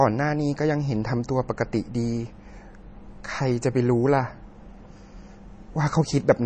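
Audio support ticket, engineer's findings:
MP3 compression, throughout the speech. Nothing above 9.1 kHz, with the treble sharply cut. Plainly audible watery, swirly texture, chirpy s sounds and smeared onsets. Likely an MP3 encoder starved of bits, dropping weak frequency lines frame to frame, consistent with about 32 kbps.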